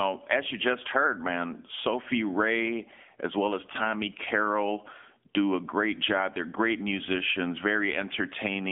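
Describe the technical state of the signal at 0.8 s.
At 0.8 s, as across the whole clip, the speech has been through an AMR narrowband mobile codec at a low bit rate, which fits a mode near 8 kbps. The encoder rebuilds each 20 ms frame from a vocal-tract model and a few pulses, so the voice sounds plainly buzzy and synthetic. Band-limiting to about 250 Hz to 3.4 kHz, with nothing above 3.6 kHz, thins the low end and dulls the consonants.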